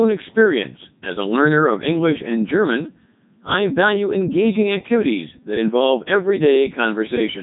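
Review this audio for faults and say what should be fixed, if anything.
Codec 2 vocoder damage runs throughout: the speech is rebuilt from sine waves, so it buzzes robotically instead of warbling like a waveform codec, with nothing above 3.8 kHz.

Carry the speech over a waveform codec at a higher bitrate rather than a Codec 2 link.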